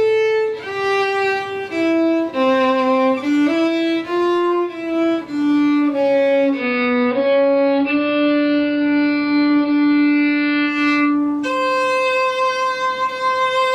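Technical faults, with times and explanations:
6.48 to 10.81 s, digital radio blending to analogue: the receiver lost its digital signal and cross-faded over roughly 170 ms to the station's AM broadcast, returning to digital at 10.81 s. During that stretch the treble narrows to the AM bandwidth and a hiss floor sits roughly 40 dB below the programme, while loudness stays level. What separates this from a codec dropout or low-pass filtering is the pairing of hiss with the AM bandwidth limit, framed by two smooth blends.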